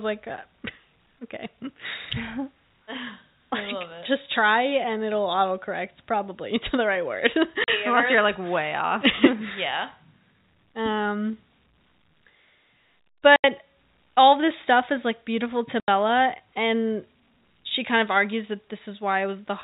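Packet loss filled with silence cuts the speech three times: at 7.64 s for 40 ms, then at 13.36 s and 15.8 s for 80 ms each, lengths that fit 20 ms packets. Each gap drops abruptly to nothing, over a band capped near 4 kHz by the G.711 telephone coding.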